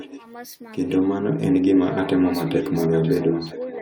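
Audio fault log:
0.00–0.24 s, 1.92–2.10 s and 2.45 s to the end: echo leak. A faint, delayed copy of the speech trails the talker, arriving about 0.95 s after the original and sitting around 15 dB below it, first in short scraps and then as a longer stretch through the final section. The likely cause is a far end playing the call over a loudspeaker whose echo canceller let part of the microphone pickup through and sent it back.
3.42–3.49 s: speech suppressed in double talk. For about 70 ms the talker's level dips, by roughly 5 dB at its deepest, while the leaked echo is running underneath, giving a brief pulled-down moment in the speech. This is likely an echo canceller that could not tell the near talker apart from the loudspeaker echo during overlapping sound, and so turned both down together.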